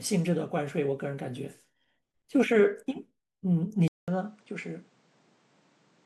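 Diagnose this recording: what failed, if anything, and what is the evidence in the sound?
At 3.88 s there's a 200 ms dropout, then the speech goes dull with nothing above 9.3 kHz, a bit quieter and with its own background noise about 30 dB below the speech. Input switched to a poorer device, likely at the driver.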